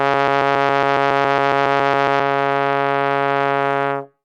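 A music clip that opens already caught in a broken-record loop. A fragment of about 138 ms repeats exactly, back to back, 15 times until 2.2 s. The music that belonged there is lost. The likely cause is a stalled player or stream resending its last buffer.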